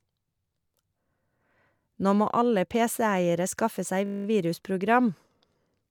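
A system hang loop hits this speech clip from 4.06 to 4.26 s, right after "skaffe seg": a single 20 ms slice repeats ten times, giving a steady 50 Hz buzz, as the hardware kept replaying one ring buffer while the system stalled.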